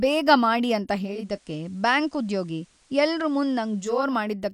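At 0.97 s the speech cross-fades over about 0.43 s from the digital stream to the station's FM analogue feed, the classic digital radio blending to analogue you get when a hybrid receiver loses the digital signal. On the FM side the level drops by about 1 dB, and a faint hiss sits roughly 40 dB under the speech. It blends back to digital at 4.17 s.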